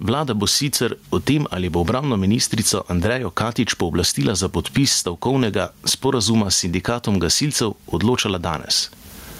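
From start to finish the speech shows gain pumping, with the level swinging by roughly 15 dB. The likely cause is input gain set far too high with a fast limiter clamping each loud syllable. Unlike a noise gate, which cuts the background to silence, here loud and soft parts end up closer in level, and the voice itself sounds flattened and squashed.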